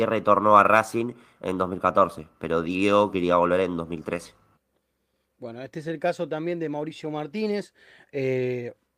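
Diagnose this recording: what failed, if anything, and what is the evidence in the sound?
Nothing failed; no stage shows any fault.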